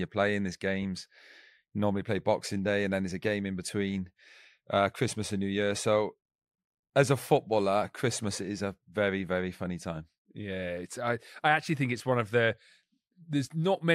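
No technical faults are audible.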